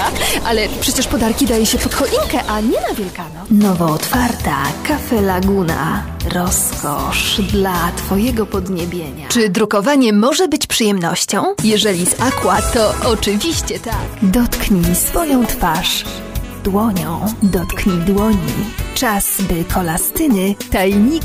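Nothing stood out on listening; no technical problem could be heard anywhere in the audio.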